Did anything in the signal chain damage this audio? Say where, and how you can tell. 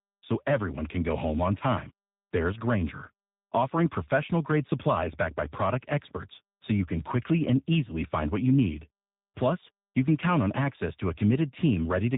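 Yes: tandem speech coding at the codec stage, throughout. CVSD coded the speech and then G.729A re-coded its already degraded output, leaving it rough, warbly and muffled, with nothing above 3.8 kHz.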